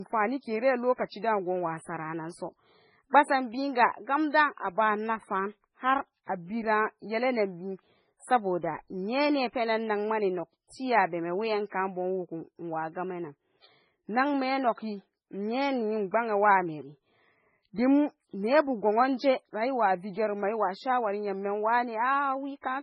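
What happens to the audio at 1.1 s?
At 1.1 s the speech sounds dull and smeared, with nothing above about 10.5 kHz, and that holds for the whole clip. This is low-bitrate audio saved at a high bitrate: a very low-rate MP3 was likely re-encoded at a generous rate, which cannot restore the lost detail.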